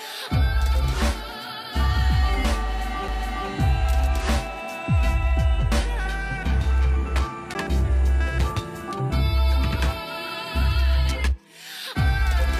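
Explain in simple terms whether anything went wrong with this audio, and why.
The disc player's laser lost its place twice, a CD skip each time. A knock or a flaw on the disc threw the laser onto another turn of the disc's spiral track. The player went silent for a split second, a few milliseconds at 3.08 s and about 10 ms at 7.54 s, and then carried on from a different spot. You hear a small tick, and the sound jumps abruptly to another point rather than continuing smoothly.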